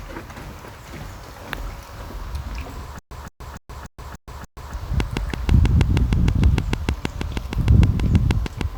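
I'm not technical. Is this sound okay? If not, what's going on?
No. From 2.99 to 4.74 s there's a stutter with silent gaps: a 0.17-second burst repeats six times, each followed by about 0.12 s of total silence. The player most likely stalled, replaying its last fragment while waiting, and the sound meant for that stretch is gone.

From 5.00 to 8.62 s comes a train of clicks: about twenty sharp ticks at a steady 6.4 per second, standing out well above the sound. These pulses likely come from electrical interference or a faulty connection or power supply.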